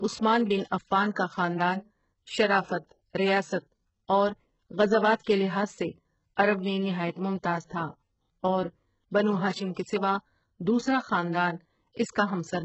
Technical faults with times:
0.00-12.64 HE-AAC compression

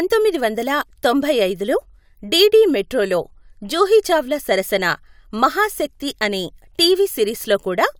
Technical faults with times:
none

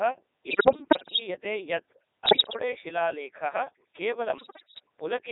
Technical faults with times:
0.00-5.32 Codec 2 vocoder
0.48-1.20 bit errors on digital voice radio
2.26-2.59 bit errors on digital voice radio
4.38-4.80 bit errors on digital voice radio

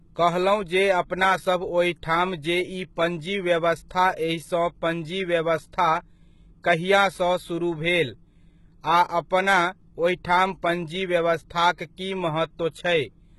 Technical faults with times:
0.00-13.38 HE-AAC compression

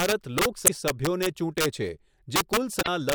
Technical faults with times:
0.00-3.15 integer overflow
0.64-0.70 damaged data in a compressed stream
2.81-2.88 damaged data in a compressed stream

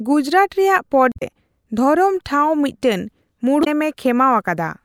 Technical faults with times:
1.12-1.22 damaged data in a compressed stream
3.61-3.67 damaged data in a compressed stream

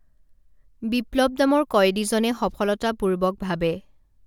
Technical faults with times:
none

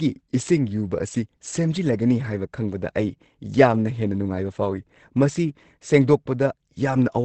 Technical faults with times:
0.00-7.25 Opus compression

